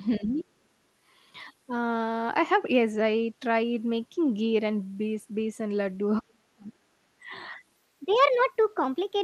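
From 0.16 to 0.2 s, a faint second voice sits about 25 dB below the speech. This is the other side's voice leaking through, likely loudspeaker echo that the canceller failed to remove.

Overlapping it, from 0.17 to 0.47 s, the speech dips by up to about 15 dB. From 6.21 to 7.36 s it drops much further, by as much as about 40 dB, and nearly cuts out. Both are speech suppressed in double talk, likely from an echo canceller that turned down the talker along with the far-end echo.

From 7.77 s to the end at 9.24 s, the voice turns high and hurried, running 1.23 times too fast and about four semitones sharp. This section at the wrong speed is likely caused by playback against a mismatched clock.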